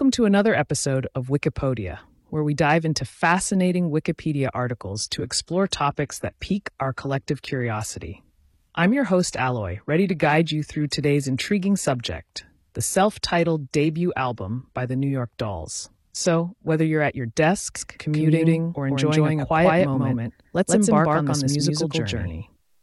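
Adaptive stream at a lower bitrate, 4.82 to 16.82 s: codec artefacts abruptly rise with no gap, which fits a switch to roughly 24 kbit/s HE-AAC.

Doubled audio track, 17.76 s to the end: an equally loud, dry, full-band copy trails about 150 ms behind, starting abruptly, likely from a slower second capture path.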